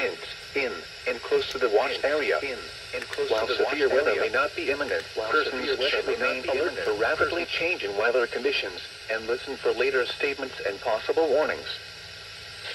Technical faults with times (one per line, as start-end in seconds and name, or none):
1.87-7.45 doubled audio track